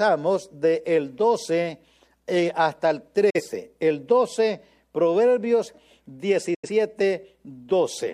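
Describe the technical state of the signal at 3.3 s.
Right after "eh hasta el" there's a digital broadcast dropout, 3.30 to 3.41 s: the receiver muted on a bad frame, an 8 ms fade into silence, audio simply gone.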